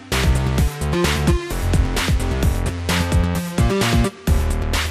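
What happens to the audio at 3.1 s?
At 3.1 s the sound carries the damage heard throughout, likely MP2 compression starved of bits, at a rate that fits around 80 kbps. Upper sub-bands switch off and flicker while the remaining bands are coarsely quantised, leaving a dull sound with a gurgling, granular grit.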